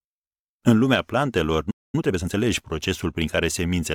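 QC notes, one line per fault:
1.70 to 1.95 s, playback stall: the speech cuts out mid-flow and there's a silent gap of about 228 ms before it resumes. That's most likely the player running dry on data or having its output thread blocked, so nothing reached the output until it recovered.
1.95 to 2.39 s, time-compressed catch-up: right after the gap the speech runs hurried, at about 1.5 times normal speed, but the pitch stays put. The player is clawing back its backlog by snipping out short slices and cross-fading the joins.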